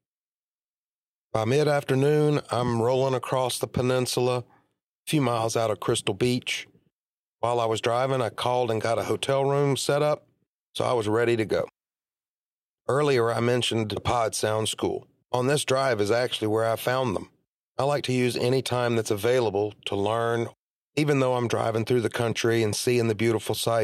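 No technical faults are audible.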